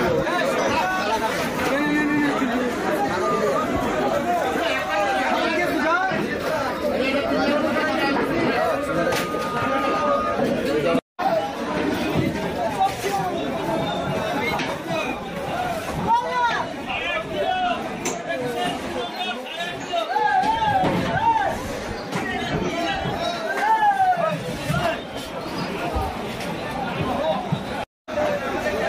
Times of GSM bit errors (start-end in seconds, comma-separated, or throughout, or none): none